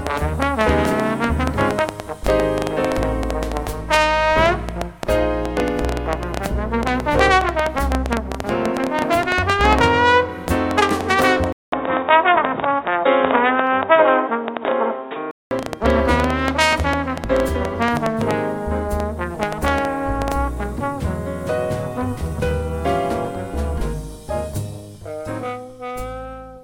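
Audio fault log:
0.07–20.33 s, train of clicks: Irregular ticking and popping, about 7 per second and roughly 150 in all, rises to about 15 dB above the sound, in pauses too. Likely cause: interference from nearby equipment or a faulty connection or power supply injecting near-identical pulses.
11.52–15.51 s, input switched to a poorer device: After a 200 ms gap the sound turns dull and boxy with nothing above 3.8 kHz, shifts by about 5 dB in level and gains a noise floor about 40 dB down. Likely cause: the input moved to a narrower-band microphone or headset call profile, then back.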